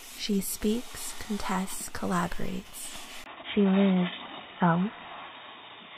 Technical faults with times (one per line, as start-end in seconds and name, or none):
3.24-5.98 input switched to a poorer device